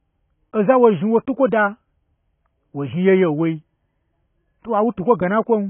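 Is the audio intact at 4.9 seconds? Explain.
No. At 4.9 s, as throughout the clip, the speech shows heavy damage that likely comes from AAC compression at a very low bitrate, around 16 kbps. The coder discards everything above 3.8 kHz and coarsely quantises what remains, so the sound is dull and smeared, with a warbling, fizzy texture.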